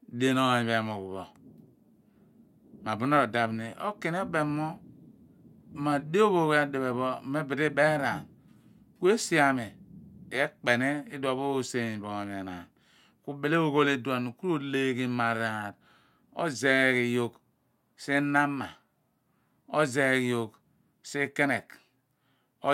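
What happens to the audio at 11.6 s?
Nothing goes wrong at 11.6 s; the speech runs through that moment intact, with no dropout, click or other fault to be heard.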